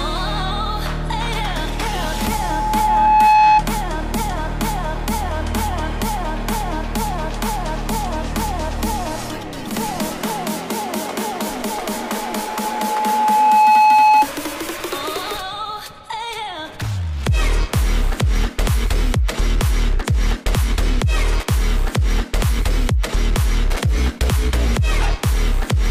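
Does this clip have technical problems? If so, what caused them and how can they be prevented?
Yes. Loudspeaker feedback squeal occurs from 1.87 to 3.64 s and from 11.97 to 14.28 s. Each time, an 856 Hz tone swells over a second or two and ends up well above the sound. The microphone picks up its own loudspeaker, and at that frequency the loop gain exceeds one. To prevent it, lower the gain, move the loudspeaker away from the microphone, or notch out 856 Hz.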